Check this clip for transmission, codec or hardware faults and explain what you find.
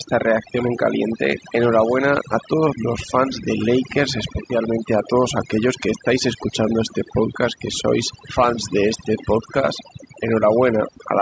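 The clip has one fault, present from start to finish: overdone noise removal. A noise reducer set too strong switches off individual frequency bands near its noise estimate, taking quieter speech detail with them. The background drops and breaks up into twinkling specks. A spectrogram shows a dark floor dotted with isolated bright points and ragged, broken harmonics, and the waveform sits unnaturally flat between phrases. The call microphone processing appears as a clean upper edge, with nothing above 8 kHz.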